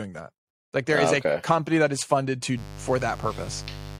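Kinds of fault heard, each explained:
Mains buzz: from 2.54 s to the end, a dimmer, rectifier or missing shield injects sharp spikes twice per 50 Hz cycle, spreading harmonics up to several kHz, so a steady, raspy buzz sits roughly 15 dB beneath the speech.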